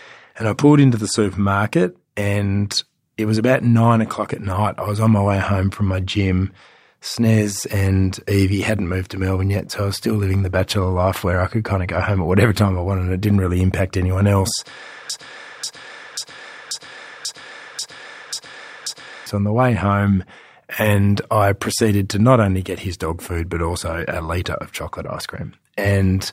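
At about 15.1 s the speech gets stuck in a broken-record loop: the same slice, roughly 0.54 s long, plays back to back eight times, identical each pass, until things recover around 19.3 s. What most likely happened is that the player or stream stalled and kept resending the last fragment it had buffered. Whatever should have been said in those four seconds is simply gone, so the speech jumps ahead when it resumes.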